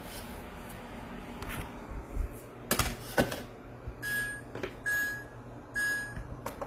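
Transcoding between lossy codecs affects the whole clip. The sound stops at about 15.8 kHz and carries two overlapping sets of coding artefacts, likely from a low-rate HE-AAC encode, around 24 kbit/s, re-encoded to Opus near 32 kbit/s, which spends bits preserving the first codec's damage.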